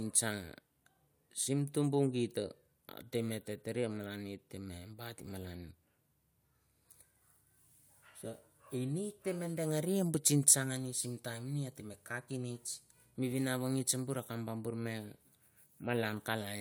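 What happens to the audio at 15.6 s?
Nothing goes wrong at 15.6 s; the speech runs through that moment intact, with no dropout, click or distortion to be heard.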